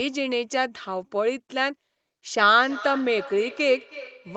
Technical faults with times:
2.55-4.36 feedback echo between two devices

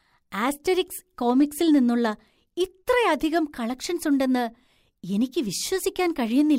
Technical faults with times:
1.30-1.78 hard clipping
3.35-3.38 hard clipping

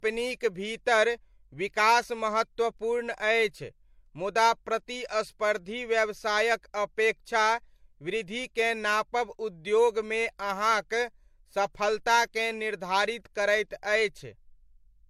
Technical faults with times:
0.00-15.09 transcoding between lossy codecs

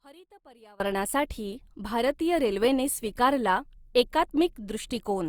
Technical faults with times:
0.00-0.80 one channel inverted

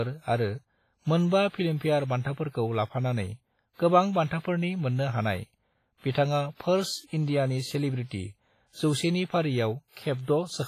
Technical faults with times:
0.00-10.68 WMA compression

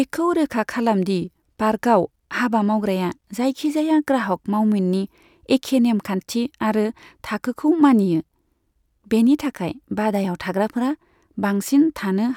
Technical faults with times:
none

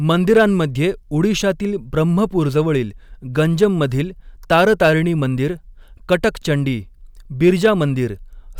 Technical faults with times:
0.11-0.44 hard clipping
3.62-3.84 hard clipping
4.52-4.91 hard clipping
7.44-7.83 hard clipping

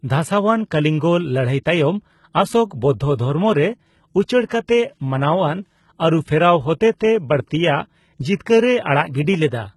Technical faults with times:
0.00-9.76 HE-AAC compression
4.46-4.50 pre-echo

